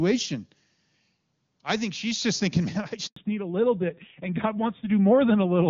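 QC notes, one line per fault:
3.06–3.16 s, handover gap: no frames arrive while the call switches networks, leaving 100 ms of silence, a flat waveform stretch and a blank spectrogram column.
3.16 s to end, fallback to narrowband: the clean HD Voice audio drops to a duller, rougher narrowband codec, which fits 7.4 kbit/s AMR-NB. The spectrogram is empty above 4 kHz.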